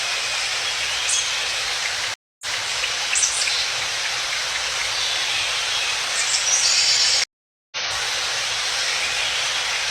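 Stream reconnects at 2.14 s and 7.24 s: the connection dropped, and a fresh decoder restarted mid-stream. After about 270 ms of silence the audio repeats from 232 ms earlier. After 480 ms of silence it skips roughly half a second ahead.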